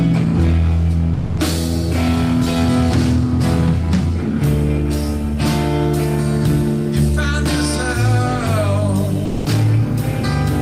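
At 1.13 s the sound cuts out for about 240 ms, and again at 9.25 s for 200 ms, leaving steady low noise before it returns. That's likely sound dropped by the voice detector, which misread it as background and switched to comfort noise.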